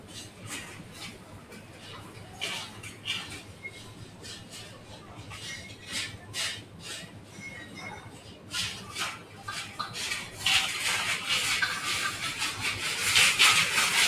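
A noise suppressor applied to music or sounds stays active for the whole clip. It treats steady, sustained content as noise, so the level rises and falls by around 15 dB. Onsets pass while held sound and decays are pulled down, giving a pumping, thinned texture.

The sound is cut by the noise suppressor at 0.0–0.44 s, 0.82–2.36 s, 3.47–5.24 s, 7.07–7.37 s, 8.06–8.48 s and 9.22–9.4 s. Sustained portions sink by about 4 to 6 dB, the deepest in the 0.82–2.36 s stretch, and tails end abruptly.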